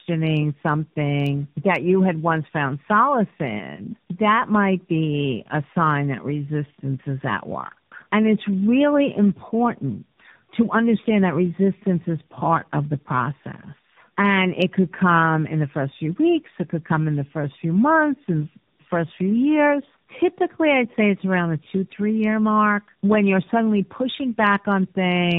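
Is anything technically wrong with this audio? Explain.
Yes. Throughout the speech, there is tandem speech coding. The call passed through several codecs in a row, including narrowband AMR at two rates, and each one re-encoded the last one's damaged output. The speech sounds rough, muffled and warbly. Nothing reaches above 3.7 kHz.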